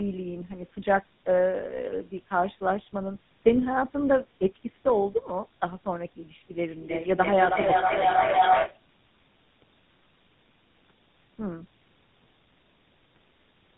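Speech that has been through tandem speech coding for its full length: decoded and re-encoded across three speech codecs in a row, which fits a chain ending in GSM full rate, with nothing above about 3.8 kHz. Unlike a single narrowband codec, it sounds rough, muffled and warbly at once, because each stage compounds the last. From 6.57 to 8.86 s a feedback howl rises to about 4 dB above the speech, narrowing to a tone near 700 Hz. Unlike a steady interfering tone, it swells and pulses roughly every 0.3 s, the delay of a microphone-to-loudspeaker loop between two devices on the call, until the loop breaks.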